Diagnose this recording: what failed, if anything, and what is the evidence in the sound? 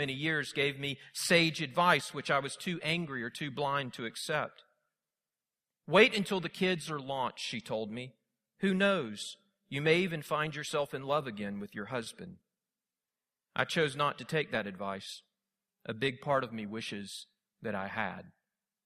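Listening closely to the speech, nothing stood out as a technical failure anywhere in the recording.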